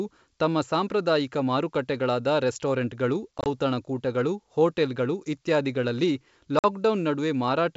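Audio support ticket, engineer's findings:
Packet loss on ADPCM call, 3.38–3.47 s after "ತಮ್ಮ ಸಾಂಪ್ರದಾಯಿಕ ಮಾರುಕಟ್ಟೆಗಳಾದ ರೆಸ್ಟೋರೆಂಟ್ಗಳು": 50 ms silence in gaps up to 20 ms, spread over 80 ms. Again 6.59–6.65 s after "ರೆಸ್ಟೋರೆಂಟ್ಗಳು ಔತಣಕೂಟಗಳು ಹೋಟೆಲ್ಗಳು ಇತ್ಯಾದಿಗಳಲ್ಲಿ". Hard-edged holes, unlike faded concealment. Slightly distorted restart from the desynced G.722 predictor and step size.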